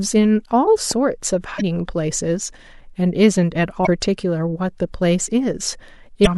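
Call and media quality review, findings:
Loud pop at 0.91–0.93 s: a single sharp pop sitting a few dB above the speech, with the speech carrying on underneath. Likely cause a voltage step or pulse somewhere in the analogue or driver side (plug, switch, static or a driver glitch). Downstream circuitry shapes it into that brief thump. One-off, no repeats.

Damaged data in a compressed stream at 1.57–1.61 s, 3.83–3.87 s and 6.23–6.27 s: short glitches, roughly 40 ms each. Corrupt or missing bytes in the encoded stream make the decoder misread those frames, lose sync and hunt for the next frame header, so a bit of audio gets mangled or jumped. Worth checking the transport and container path.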